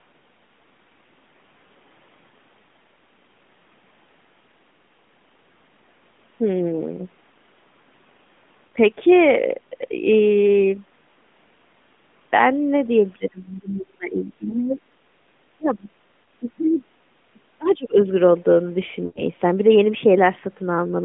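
At 2.28 s and again at 8.68 s the speech briefly stalls and warbles for about 40 ms. These are lost AMR speech frames: the decoder has nothing valid for that stretch, so it repeats the last pitch and vocal-tract settings at reduced gain, which fits two 20 ms frames. A similar, shorter hiccup appears around 14.5 s.

From 13.17 to 14.81 s the talker's level sinks unevenly, by about 30 dB at its deepest, and parts of the speech are chopped out. This is likely speech suppressed in double talk. The echo canceller seems unable to tell the near voice from loudspeaker echo while both ends speak, so it attenuates everything. The same pumping returns at 15.57–15.90 s (about 25 dB), 16.40–16.89 s (about 25 dB), 17.33–17.40 s (about 20 dB) and 17.58–17.97 s (about 25 dB).

Another 40 ms frame loss falls at 16.24 s. Inside the suppressed stretches, at 16.71–16.75 s and 17.69–17.75 s, brief fragments of a second voice surface, about 35 dB below the talker. 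This is likely the other side's voice leaking through, residual loudspeaker echo the canceller failed to remove.

The longest dropout runs from 19.06 to 19.23 s. For about 100 ms, roughly five frames' worth, the concealment holds and drags out the sound, then fades it toward silence. The speech returns weak or rough, all within the narrowband 3.5 kHz AMR-NB line sound.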